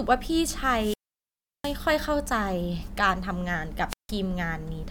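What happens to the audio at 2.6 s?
Nothing goes wrong at 2.6 s; the speech carries on intact through that moment, with no dropout, click or distortion.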